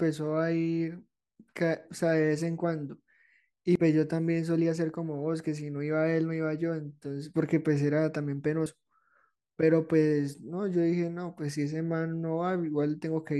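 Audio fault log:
3.76 s and 8.66 s, dropped buffer (overrun): at each spot the speech jumps ahead with no gap, losing roughly 40 ms. That's likely a buffer the recording side didn't collect in time, so it got overwritten and the edges were spliced together.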